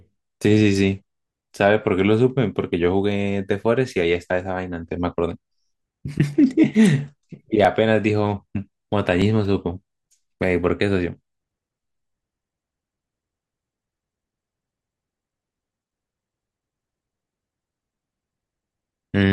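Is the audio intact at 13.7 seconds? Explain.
Yes, at 13.7 seconds the speech plays through cleanly, with no audible dropout, click, distortion or other fault at that moment.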